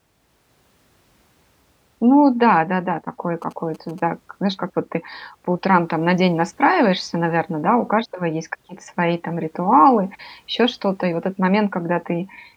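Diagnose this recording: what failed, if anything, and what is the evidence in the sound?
A nearby 2G phone's signalling bursts were picked up and rectified in the analogue wiring: GSM signalling bursts from 3.42 to 4.00 s. The radio pulses become a galloping run of short buzzes at about 217 Hz, sitting faintly beneath the speech.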